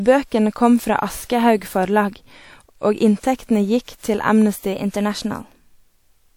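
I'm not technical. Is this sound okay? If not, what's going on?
No. From 4.73 s to the end, the speech plays about 6.4% fast and sits roughly a semitone (107 cents) higher. This is likely a drift correction step, where clock-matching software abruptly changed the playback rate to rebalance its buffer.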